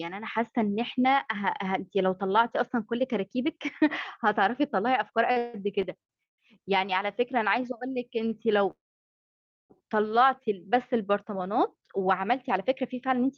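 From 5.31 to 6.40 s there's a stutter of repeated stalls: the jitter buffer ran dry five times, the longest gap being 160 ms, so the sound drags and catches with nothing lost. Then 7.33 to 7.78 s gets a jitter buffer slow-down, with pitch periods repeated to add 38 ms, so things run at 93% speed and sound slightly drawn out. At 8.28 to 8.33 s a late packet causes a short stall, and the last sound is held about 27 ms too long. From 8.71 to 9.72 s a call audio freeze leaves about a second of held-up audio, mostly dead silence for 940 ms, likely packets delayed in transit, before it resumes exactly where it stopped.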